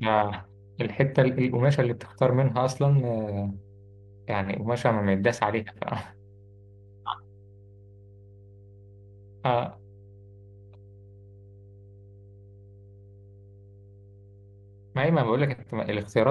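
Underneath the speech, from start to finish, runs mains hum: a steady low tone at 50 Hz, with some low harmonics above it, sitting roughly 25 dB below the speech. Power-line current has leaked into the signal, most plausibly through a ground loop or a nearby transformer. On a spectrogram it appears as an unbroken horizontal line at 50 Hz, with weaker lines stacked at its multiples. The waveform's quiet gaps between phrases show a small regular ripple instead of flat silence.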